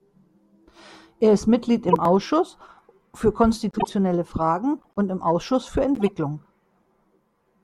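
Flipped bits in compressed frames were decoded and played anyway, putting energy at the wrong frequencies. This corrupt frame decoded fault occurs four times. At 1.88–1.95 s it hits one frame and is loud. At 3.71–3.89 s it spans several frames. At 4.79–4.96 s, just before "und im", it is faint. At 5.95–6.09 s it is moderate. Each one sounds like a short chirp or burst of noise.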